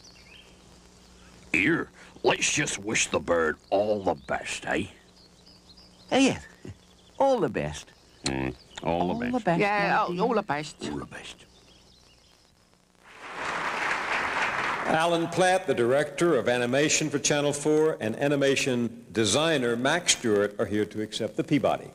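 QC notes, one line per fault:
15.00 to 21.95 s, pre-emphasis left on: the treble boost of a CD-style 50/15 µs emphasis curve reached playback without its matching de-emphasis cut, so highs stand about 8 dB above 1 kHz at 10 kHz, making the sound thin, bright and sibilant.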